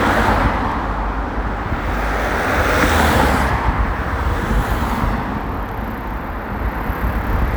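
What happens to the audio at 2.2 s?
Nothing goes wrong at 2.2 s; the sound carries on intact through that moment, with no dropout, click or other fault.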